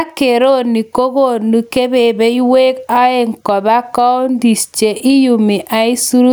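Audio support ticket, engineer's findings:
Gain pumping, throughout: loud and soft parts squashed closer in level, swing around 10 dB; likely input gain set too high with a fast limiter clamping peaks.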